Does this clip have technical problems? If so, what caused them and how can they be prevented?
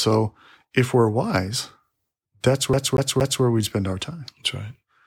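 Yes. The speech has a CD stuck on one turn from 2.73 s to 3.44 s, just before "we spend our time". The same slice of about 234 ms plays three times in a row. Each repeat is cut off by a brief mute as the playback jumps back. This gives the quick, even stutter of a skipping disc. A scratch or smudge sends the laser back one track at the same point on each rotation. To prevent it, clean or replace damaged discs and rip them with error-checking software before use.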